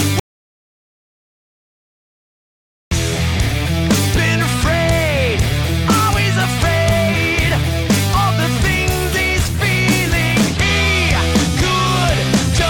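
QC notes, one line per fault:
0.20–2.91 s, audio dropout to silence: sound cuts to silence with no room tone for about 2.7 s, likely from input lost while recording continued.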